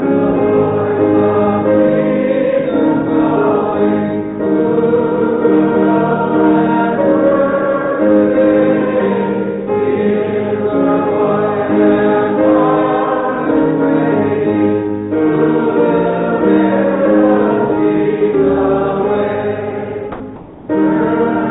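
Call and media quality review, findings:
Sound dropped by the voice detector, 20.12–20.20 s. Probable component: sender voice detector, likely misjudging low-level sound as background and halting transmission. Receiver substitutes comfort noise for 80 ms. About 70 ms of actual sound lost, replaced by a brief patch of steady noise before the signal resumes.

Comfort noise in place of the background, 20.36–20.68 s. Probable component: discontinuous transmission at sender, likely with receiver-side comfort noise generation. Real background, sitting about 21 dB below the loud passages, swapped for 320 ms of flat, detail-free synthetic noise, about 2 dB quieter. Band limit at 4 kHz, consistent with G.711 at 64 kbps, applies to both fills.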